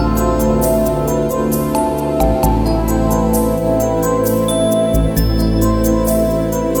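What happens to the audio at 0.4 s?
Nothing goes wrong at 0.4 s: the audio carries on intact there, with no dropout, click, distortion or other fault at that moment.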